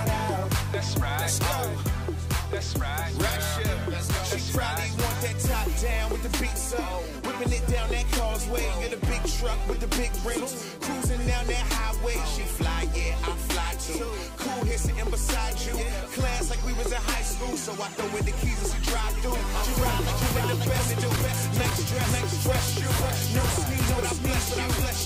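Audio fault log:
19.56 s to end: doubled audio track. A second full-band copy of the sound cuts in abruptly, about half a second behind and roughly as loud, with no decay or room colour. It's likely a slower second capture path or an edit holding two out-of-step copies.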